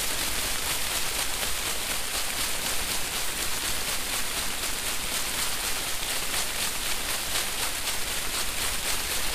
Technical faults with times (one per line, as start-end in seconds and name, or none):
0.00-9.34 DC offset